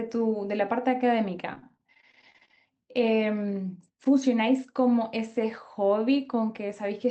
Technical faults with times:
1.53-2.57 repeated packet loss (robotic sound)

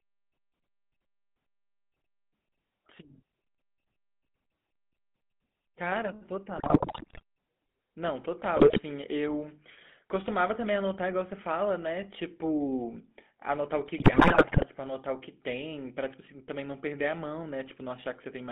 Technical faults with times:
0.00-18.51 GSM full-rate codec
6.58-7.22 GSM bit errors
8.56-8.80 GSM bit errors
13.98-14.65 GSM bit errors

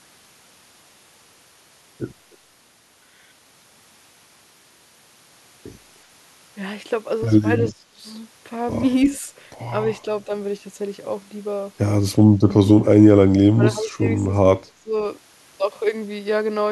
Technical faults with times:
7.69-7.73 echo leak
7.71-8.02 speech suppressed in double talk
9.12-9.16 echo leak
12.72-14.26 speech suppressed in double talk
14.77-14.93 speech suppressed in double talk

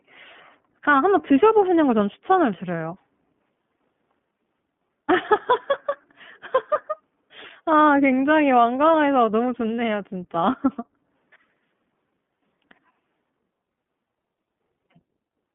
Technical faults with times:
0.00-15.54 iLBC codec

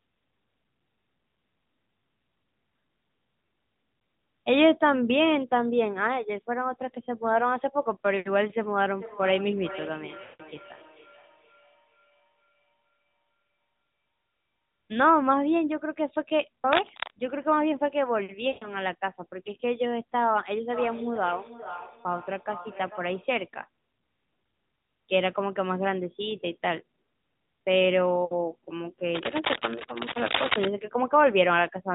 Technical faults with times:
8.89-14.15 feedback echo between two devices
10.24-10.43 lost AMR speech frames
16.73-17.12 cable scratch noise
18.48-18.77 lost AMR speech frames
20.74-23.39 feedback echo between two devices
29.14-30.68 cable scratch noise

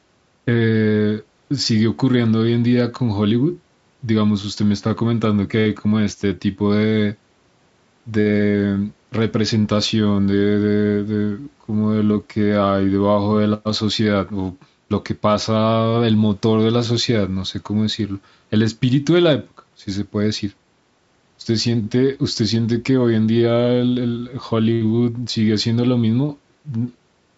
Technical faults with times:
none

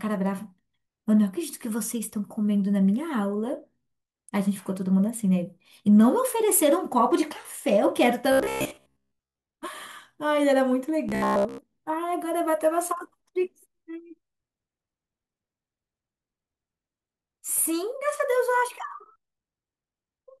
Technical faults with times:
8.32-9.46 robotic sound from repeated short buffers
11.09-11.58 robotic sound from repeated short buffers

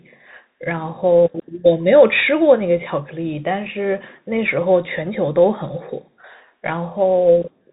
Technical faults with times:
0.00-7.72 Bluetooth CVSD headset codec

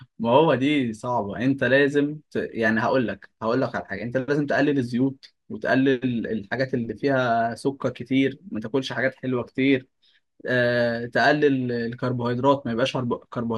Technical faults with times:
none

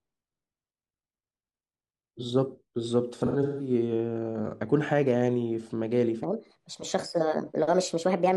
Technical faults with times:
3.17-3.70 AAC frame loss with concealment
6.23-8.36 section at the wrong speed
6.45-6.52 AAC frame loss with concealment

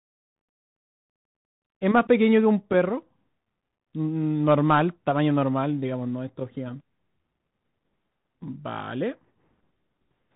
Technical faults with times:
0.00-10.36 Bluetooth CVSD headset codec

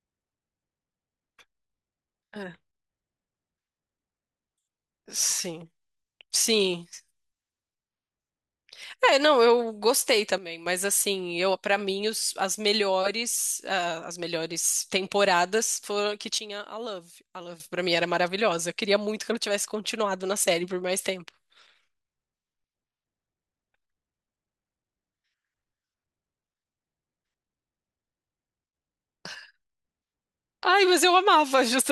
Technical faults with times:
10.38-10.66 sudden gain jump
16.38-17.60 sudden gain jump

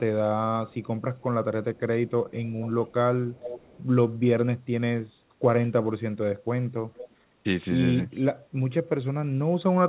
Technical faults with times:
0.68-1.23 echo leak
1.76-1.80 echo leak
2.29-2.93 echo leak
3.33-3.83 echo leak
6.94-7.15 echo leak
8.11-8.26 echo leak

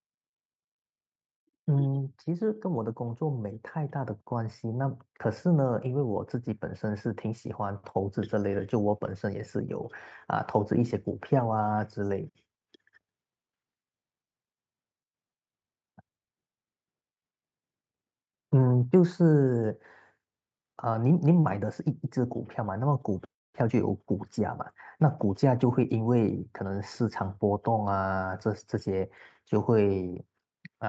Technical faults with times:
2.26-9.97 automatic gain rising

